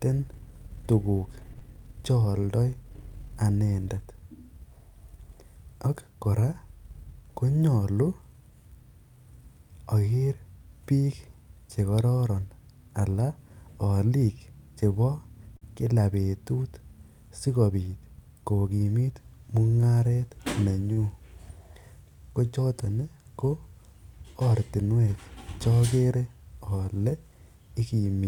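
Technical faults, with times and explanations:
1.59–1.63 s, short concealed packet loss: a brief smear or wobble in the speech as roughly 20 ms of audio fails to arrive in time. The receiver bridges the 22 ms hole by extending the preceding sound, then blends back into the real signal.
15.57–15.63 s and 20.93–20.99 s, short stall from a late packet: one sound is held unnaturally long, with a slight buzz or dip, for 48 ms and then 45 ms. Each time a packet arrives late, the jitter buffer empties and the last sound is stretched until playback resumes where it stopped. Nothing is lost, but the delay grows by those amounts.
18.80–19.02 s, jitter buffer speed-up: the speech briefly sounds hurried, running at 113% speed with its pitch unchanged. The receiver is clearing excess buffered audio by cutting out short pitch-period slices in quick succession, removing about 40 ms in total.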